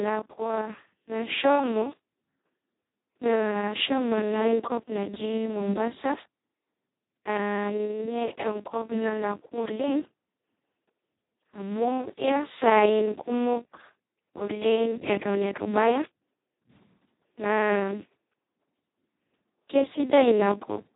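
From start to finish the speech carries heavy Speex codec damage, the sound of this CELP coder run at its lowest quality, which points to a bitrate of roughly 2 kbps. With so few bits left for the excitation, the voice turns hoarse, buzzy and robotic, close to a vocoder. A spectrogram shows nothing above 3.8 kHz and smeared, blotchy harmonics below it. The waveform keeps its envelope, but its fine detail looks coarse and noisy.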